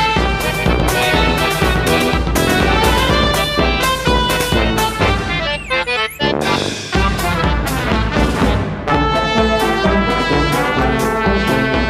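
From 0.44 to 3.32 s the sound is followed by a second copy, about 5 dB quieter, trailing by roughly 150 ms, with no decay, that appears and vanishes abruptly. This is a doubled audio track, likely from a second, slower capture path mixing in.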